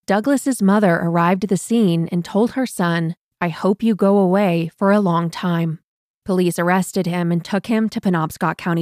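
No technical faults can be heard in this recording.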